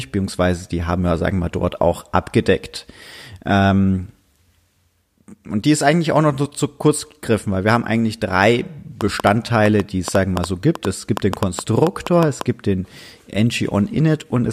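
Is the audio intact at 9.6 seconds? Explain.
No. At 9.6 seconds the speech sits inside a train of clicks running from 9.01 to 12.42 s, starting just after "wir haben eigentlich drei" and ending before "gibt den". About twenty similar pulses arrive at roughly 5.3 per second, unevenly spaced. They peak about 15 dB above the speech, so they pop clearly over it and through the pauses. The likely cause is interference from nearby equipment or a faulty connection or power supply.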